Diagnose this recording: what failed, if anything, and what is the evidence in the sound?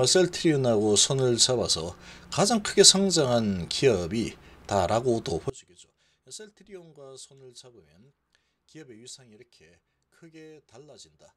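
From 5.50 s to the end, the level collapses by about 26 dB and what remains is faint, with the centred low end nearly gone. The likely cause is one channel inverted, most plausibly a polarity swap in the analogue wiring of one leg. When the two channels are summed to mono, their shared content cancels, leaving only the small difference between them. That residue is what carries through the final stretch.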